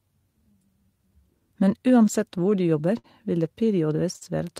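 Through the whole of this speech clip the pacing feels faintly unsteady, with tiny hiccups at irregular spacing rather than any single obvious break. That is clock drift between sender and receiver: the sending device's clock runs roughly 5 percent slow against the receiving end, so audio arrives a little slower than it is played out and the jitter buffer keeps draining. The receiver has to keep patching the shortfall, and the two more distinct events later on are where it briefly fails to keep up. From 0.12 to 2.81 s the speech drags slightly, running at about 96 percent of its natural rate, with small seams where short pieces seem to recur. These are repeated timing corrections: to stop the buffer running dry, the receiver repeats brief fragments of sound, all in the same direction and unevenly spaced, adding about a tenth of a second over the stretch. At 2.99 to 3.06 s and again at 4.16 to 4.23 s a sound is held unnaturally long with a slight buzz or dip before the speech carries on without a gap in content. 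Each is a short stall from a late packet: the buffer emptied, and the receiver stretched the last sound for about 52 ms and then 50 ms until the data arrived, so nothing is lost but the delay grows by those amounts.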